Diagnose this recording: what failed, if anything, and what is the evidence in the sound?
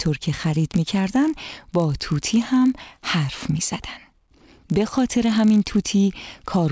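Resampler restarted on every block, present throughout. This is a sample-rate conversion fault. A faint buzz at 50 Hz runs under the sound wherever there is signal and drops away in the gaps. It is the tick rate of 20 ms blocks. The converter, which sounds like a 48 kHz to 16 kHz reduction, processed each block in isolation. At every block edge it lacked the true neighbouring samples, so a small error lands on each boundary and the errors repeat as that steady buzz.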